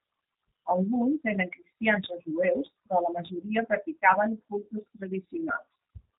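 Throughout, G.729 codec damage is plainly audible, a rough, synthetic speech sound consistent with 8 kbit/s coding; the spectrogram shows nothing above 3.8 kHz.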